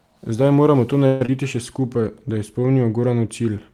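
Just after "moramo to", at 1.06 s, the speech gives way to a continuation of the last sound as a buzz or hiss that fades until 1.29 s, with no true silence. The speech resumes with about 120 ms of it gone. This is likely a long network dropout, where packets stopped arriving and the receiver filled the gap, here about 218 ms. On a spectrogram, the repeated harmonics smear into a fading band before the resumption.

From 1.80 to 2.72 s, a jitter buffer slow-down stretches the speech to about 91% speed, adding 95 ms. The buffer repeated single pitch periods or bits of pauses to build a reserve. Pitch stays unchanged, but sounds drag. In the waveform, near-identical cycles repeat back to back. On the spectrogram, harmonics hold at the same spacing while their features stretch out in time.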